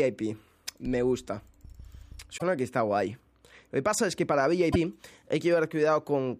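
Broken MP3 bit reservoir at 2.37–2.42 s and 4.72–4.76 s: the sound jumps ahead into a brief chirp, burst of noise or short hole, likely from frames borrowing reservoir bytes that were cut away.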